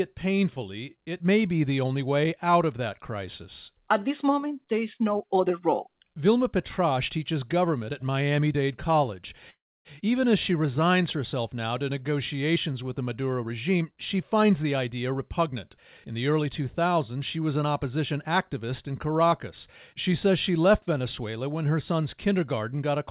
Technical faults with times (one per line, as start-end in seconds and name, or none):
9.50-9.88 call audio freeze
13.43-16.01 jitter buffer speed-up